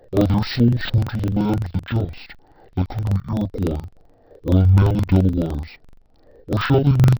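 From the start of the speech to its end, the audio shows interleaved audio read as planar. Each block of about 42.7 ms, which fits a 2048-sample buffer, has its alternating left and right samples split into first and second halves. Both halves play at half speed, so the voice drops an octave while the pace stays intact. The sound is doubled and choppy, with a rough flutter at 23.4 Hz from the block boundaries.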